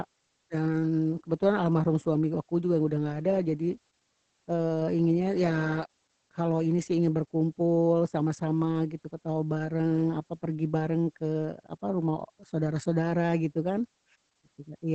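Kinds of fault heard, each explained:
Opus voice compression: a low-rate linear-prediction codec running throughout this speech, the sound pointing to around 10 kbps in SILK mode. Nothing above about 9 kHz survives, and the coarsely coded excitation leaves the speech heavily muffled, hoarse and slightly robotic.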